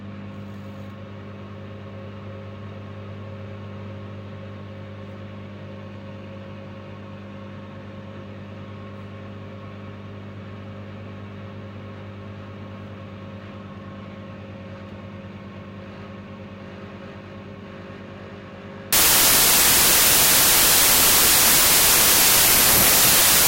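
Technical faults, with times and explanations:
18.93–23.48 s, wrong sample width: loud noise buries the sound, which plays slower and lower at 0.75 speed, as if 32-bit samples were read as packed 24-bit.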